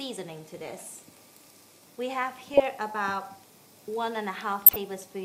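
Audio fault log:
2.54–2.62 s and 4.52–4.76 s, DAB burbling: bit errors from weak reception slip past error correction into the MP2 data, so wrong samples give short blips of noise in single sub-bands and wrong scale factors make sub-bands jump in level for up to a frame. The second burst is longer and denser, consistent with about ten damaged frames against five.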